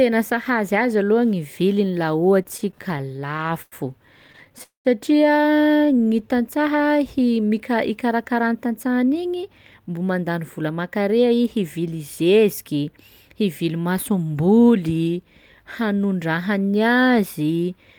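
A speech recording that catches and drags between 2.43 and 3.74 s with 18 brief stalls (the longest 99 ms, about a fifth of that span filled in) and again from 4.28 to 4.61 s with six tiny ones. These are repeated stalls (stutter): packets arrived late, so the jitter buffer kept running dry and the receiver stretched the last sound until data resumed. Right after, from 4.63 to 4.87 s, the sound hangs for 214 ms, fading into about 130 ms of silence before picking up where it stopped without losing anything. This is a call audio freeze, likely caused by packets held up in transit that emptied the buffer and added that delay. From 5.85 to 6.28 s the speech slows to 86% speed at unchanged pitch, gaining 66 ms, a jitter buffer slow-down in which repeated pitch periods rebuild a reserve. Between 8.08 and 11.27 s it runs hurried at 108% speed with pitch intact, a jitter buffer speed-up that trims roughly 0.3 s of surplus buffered audio.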